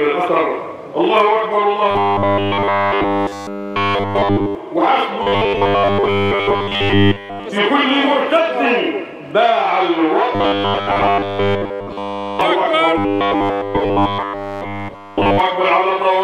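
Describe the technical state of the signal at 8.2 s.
At 8.2 s the signal is intact, with no audible fault at that moment.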